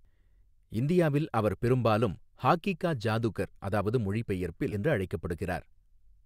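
At 4.71 to 4.74 s the speech jumps abruptly forward, with a short blip at the join. The likely cause is a stream segment skipped: one chunk of the segmented stream failed to arrive, and the player moved straight on to the next one instead of waiting. A stretch of the speech is simply gone. The sound before the gap is cut off and spliced against later material, so the flow of speech breaks without any fade.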